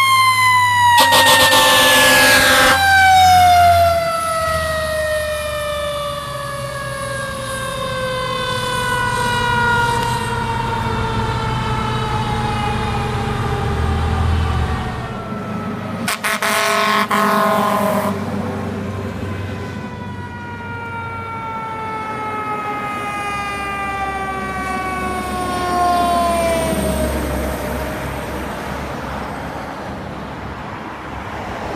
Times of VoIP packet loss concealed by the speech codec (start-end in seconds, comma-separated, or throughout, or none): none